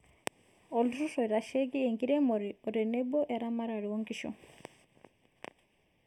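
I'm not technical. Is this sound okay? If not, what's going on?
No. Throughout the speech there's a fault called channel delay, which causes comb filtering. One side of the recording arrives a tiny fraction of a millisecond late, roughly 0.4 of a millisecond, and when both sides are blended, parts of the sound cancel out. This makes the voice hollow and phasey, with the first gap somewhere around 1.5 kHz. Unlike plain muffling, the dullness comes as fixed dips rather than lost treble, and unlike echo, nothing repeats.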